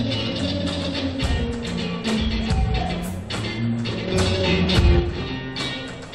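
At 4.08 s there's a sudden gain jump: the sound and the background noise both step up by about 5 dB at once and stay there until 5.00 s, when they drop back. It's likely a digital gain change applied instantly, with no ramp.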